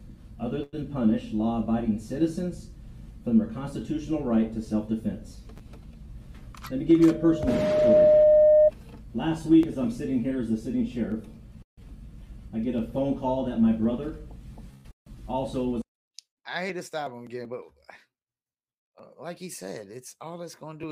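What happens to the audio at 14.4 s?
Nothing goes wrong at 14.4 s; the audio plays through that moment intact, with no dropout, click, glitch or other fault.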